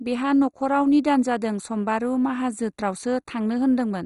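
Speech, dull and gurgling from start to end. Nothing survives above 11.2 kHz. Upper bands flicker in and out, and the rest sounds grainy. Heavy MP2 compression is the likely cause, starving its sub-bands of bits, which fits a rate near 56 kbps.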